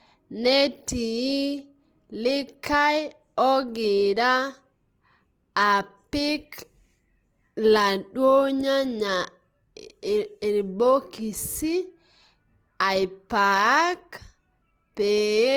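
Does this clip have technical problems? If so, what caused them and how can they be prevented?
Yes. Opus compression runs through the whole clip. The speech sounds grainy and rough, with a noisy texture where tones should be clean. This is likely the music mode filling starved bands with folded or noise energy, which fits a bitrate around 24 kbps. Encoding speech at a higher bitrate would prevent it.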